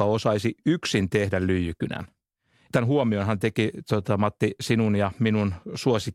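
No faults turn up anywhere in the audio: no dropouts, clicks, distortion or timing problems.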